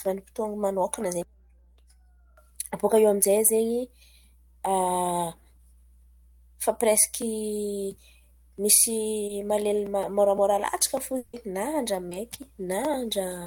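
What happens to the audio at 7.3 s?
At 7.3 s the speech sits over mains hum, present for the whole clip rather than starting there. Power-line current leaking in through a ground loop or nearby transformer adds a steady 60 Hz tone with low harmonics, roughly 30 dB below the speech.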